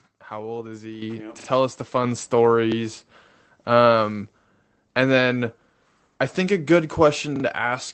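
At 1.02 s the microphone volume steps up by about 8 dB, and at 2.04 s, just after "us the", by about 4 dB more. Each time the call software raised the input gain in one jump, so voice and background rise together and stay louder. That shared, lasting rise is what separates it from a simple change in how loudly someone talks.

Repeated buffers occur at 1.4 to 1.48 s, just before "us the", then at 2.72 to 2.76 s and at 7.36 to 7.44 s, after "i think a good". Each time, fresh audio came late and the device replayed a short piece, twice extra at the first and last, once at 2.72 s. Each repeated piece fits a 40 ms buffer. The result is a hard-edged stutter with nothing missing, not a gap or dropout. Through the Opus call path, the sound has no content above 8 kHz.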